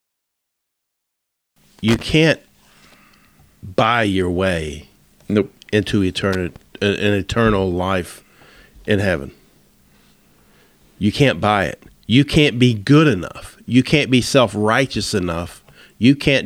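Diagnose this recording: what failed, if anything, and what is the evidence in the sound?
Loose connector crackle in the analogue wiring: irregular scratchy bursts at 1.88–2.02 s and 6.33–6.56 s, the second right after "your way nope into". A worn contact making and breaking chops the speech, showing as dropouts and sharp spikes on the waveform and broadband vertical streaks on a spectrogram.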